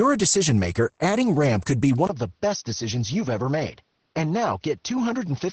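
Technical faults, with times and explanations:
Throughout: Opus voice compression. The speech is muffled and slightly hoarse, with a faintly robotic edge. Nothing is present above 8.6 kHz, which fits wideband SILK coding at a low rate of about 12 kbps. The linear-prediction coder codes the excitation coarsely in 20 ms frames, and that produces the roughness. A simple low-pass filter would only dull the top. This damage also grains and buzzes the voice itself, consistently from start to finish.
2.07 s to the end: input switched to a poorer device. A 20 ms silence falls at the switch. After it the band closes down further, so nothing is present above 6.2 kHz. The level drops by about 5 dB, and a new noise floor appears around 45 dB below the speech. The likely cause is a change to a narrower microphone or a headset call profile. The gap, the level step and the fresh background noise all mark this as a hardware change rather than the codec narrowing its band.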